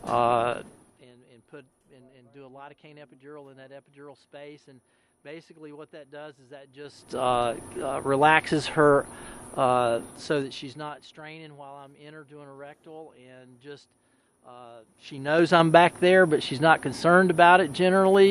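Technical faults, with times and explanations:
10.03–11.29 s, zipper noise: a fast ticking rides the sound as it drops about 25 dB in 3 dB steps, roughly seven a second, unsmoothed.
14.81–15.65 s, zipper noise: the same zipping returns as the level climbs back about 25 dB, 3 dB jumps at around ten per second.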